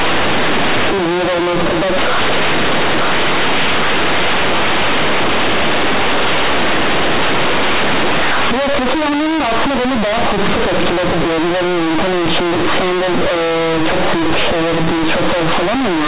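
Throughout the speech, companded audio is read as linear. The mu-law telephone bytes were played as plain 8-bit samples without expansion. Each sign change swings the waveform across half its range. Quiet and loud passages come out equally loud, with harsh buzzing distortion and heavy noise filling pauses.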